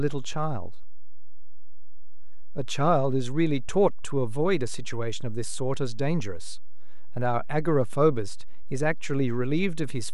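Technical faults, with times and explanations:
Throughout, DC offset: nothing audible, but the speech waveform sits shifted off zero by a constant, wasting headroom and leaving steady energy at the spectrum's very bottom.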